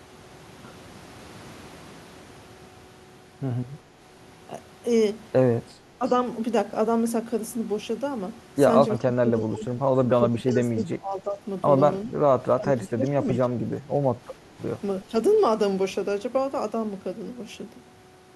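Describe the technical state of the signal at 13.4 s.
Speech is suppressed in double talk here, from 12.56 to 13.91 s. It dips about 20 dB. Overlapping talk likely confused an echo canceller.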